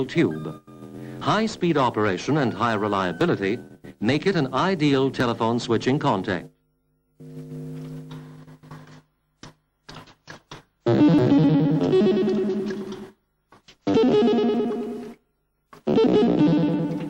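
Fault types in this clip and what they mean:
Overlap between stream segments: the time stamps of adjacent 2-second segments overlap, so the player trims sound that was never actually doubled, discarding about 12 to 15 ms each time. The waveform jumps, causing tiny clicks or skips at 1.21, 3.21, 5.2, 11.19 and 15.18 s.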